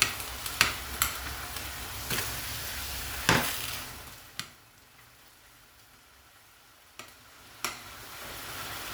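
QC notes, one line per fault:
Nothing stood out on listening to this audio.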